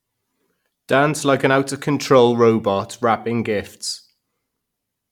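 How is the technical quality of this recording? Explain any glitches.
The technical quality of this recording is sound, with no glitches to explain.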